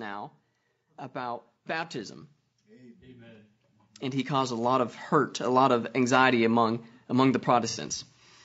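Throughout the speech, the roughness and graininess, with noise between the harmonics and a thin, synthetic top band, most likely come from low-delay AAC compression (AAC-ELD) at a bitrate around 32 kbps. Its short frames resolve pitch poorly. From 1.12 to 5.68 s, automatic gain rising pushes the level up by about 14 dB, so the voice and background swell together gradually. From 7.70 to 7.78 s, AAC frame loss with concealment drops about 60 ms of audio, consistent with two lost frames. The decoder patches the gap from the last good spectrum, leaving a brief smeared, noisy, phasey blur.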